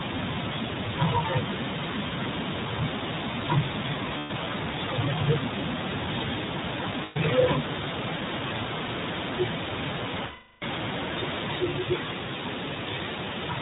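Speech squeezed through the iLBC codec, so it's band-limited to 4 kHz and sounds a bit rough and synthetic, which fits the 15.2 kbps mode with 20 ms frames. You'll also hear lost iLBC frames at 4.18–4.31 s, 7.04–7.17 s and 10.26–10.63 s, each filled with a buzzy, held vowel-like pitch repeat that fades over the longest gap before the voice snaps straight back.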